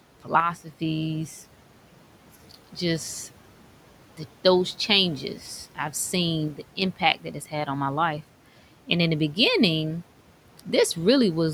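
At 0.40 s the speech level drops abruptly by about 6 dB. It recovers at 0.71 s. The same thing happens again from 6.48 to 6.82 s. Both dips sound like one channel drops out. The likely cause is one stereo channel briefly going silent before the mono sum. What both channels share then arrives at half level. Anything carried only by the lost channel vanishes. The speech sounds suddenly quieter for about a third of a second.

Just after that, from 6.96 to 7.67 s, there is speech cut by the noise suppressor. The suppressor mistook parts of the speech for background and pulled them down with it. The deepest cut is about 12 dB. The affected parts add up to roughly 150 ms. Those parts of the speech sound swallowed and faint. The room noise sits about 21 dB below the speech, and the suppressor is working against that noise here.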